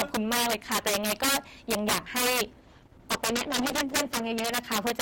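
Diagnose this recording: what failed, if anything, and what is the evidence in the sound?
Integer overflow runs through the whole speech clip: loud peaks turn into harsh cracks rather than flattened tops. A gain stage in sample-format conversion pushed the signal about 10 dB past full scale, and the few percent of samples over the limit wrapped to the opposite sign instead of being clamped.

A call bitrate drop runs from 2.61 s to 4.61 s. The speech goes rough and muffled, with the top end cut away for about 1.9 s. A falling bandwidth estimate on the network made the codec step down from 32 to 11 kbps before recovering.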